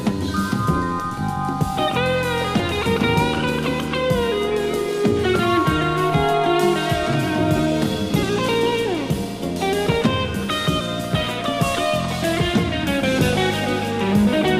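No technical faults are audible anywhere in this audio; the signal stays continuous and stable throughout.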